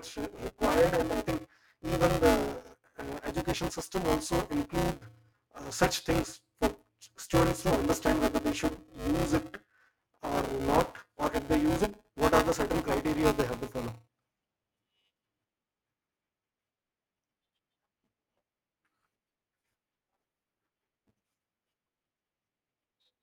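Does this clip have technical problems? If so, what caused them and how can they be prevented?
Yes, there's buffer tearing throughout. A robotic buzz at 200 Hz rides on the speech, as about a fifth of each buffer replays audio roughly 10 ms stale. Keep writer and reader pointers properly synchronised, with adequate buffer headroom.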